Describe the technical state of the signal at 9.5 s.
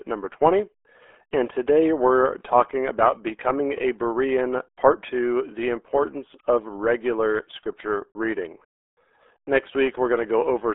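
At 9.5 s you're hearing the RealAudio 14.4 codec, which runs through the whole clip. The speech is squeezed into a narrow band of roughly 300 Hz to 3.5 kHz, with nothing past 3.8 kHz. The heavy codec damage points to an 8 kbit/s dial-up-era stream and leaves it muffled and gargly.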